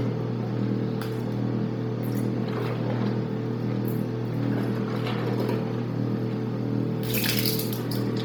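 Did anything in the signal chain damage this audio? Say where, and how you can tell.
Yes, at the codec stage: throughout, the sound has heavy grainy, noise-filled upper bands capped at 20.2 kHz, likely Bluetooth LC3 compression at a low bitrate.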